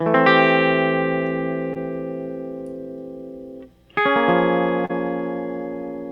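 Short concealed packet loss occurs twice in this music. At 1.73 to 1.77 s about 20 ms of audio failed to arrive in time, and at 4.85 to 4.91 s about 40 ms. In each case the receiver filled the gap by extending the preceding sound and then cross-fading back into the real signal. The result is a brief smeared, wobbling patch, longer at the second event.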